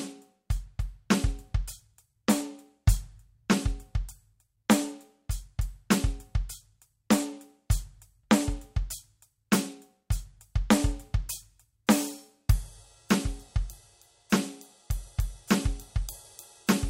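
No technical faults occur at any point in this music.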